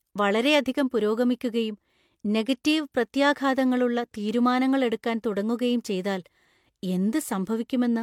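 The clip is speech, and it shows transcoding between lossy codecs throughout. Two different sets of compression artefacts sit on top of each other. There is a smeared, swirly quality in the upper range alongside a harsher, more metallic graininess. The top end is limited by the lower cut-off of the two. The sound likely passed through a low-rate HE-AAC encode first, around 48 kbit/s, and then an MP3 encode near 96 kbit/s. The MP3 stage spent its bits re-coding the earlier damage.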